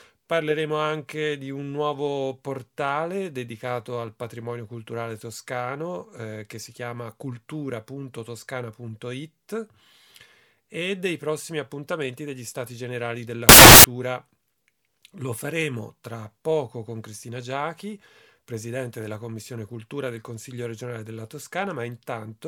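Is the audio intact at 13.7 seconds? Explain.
No. From 13.49 to 13.84 s the samples are built from the wrong bytes: the reader assembles each sample with its bytes misaligned or in swapped order, so the rapidly fluctuating low-order bits end up as the most significant part of every value. The original waveform is lost under that scrambling, and for about a third of a second the passage becomes loud, harsh broadband noise, close to white on loud sounds.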